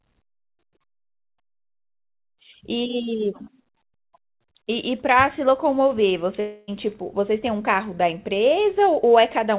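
From 6.40 to 6.70 s the speech turns into a buzzy, fading continuation of the last sound that never drops to true silence, then resumes with about 0.28 s missing. A long network dropout is the likely cause. The gap lasts far longer than a brief packet-loss glitch.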